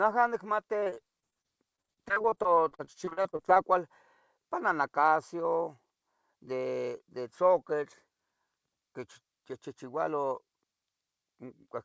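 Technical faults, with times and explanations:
0.8–3.6 s, repeated packet loss (robotic sound): the speech turns choppy, broken by dozens of dropouts up to 38 ms long. Each hole is papered over by stretching the preceding sound, and nearly a quarter of this stretch is such patching.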